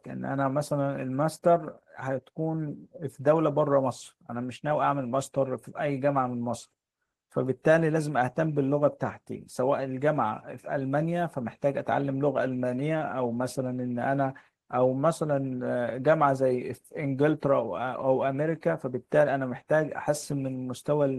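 Speech recording with no technical fault audible anywhere in it. No problem in the audio path shows up at any point.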